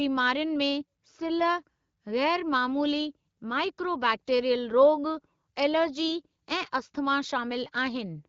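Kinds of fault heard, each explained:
No fault turns up anywhere in this speech; it's simply carried over an AMR wideband (HD Voice) link running at 12.65 kbit/s.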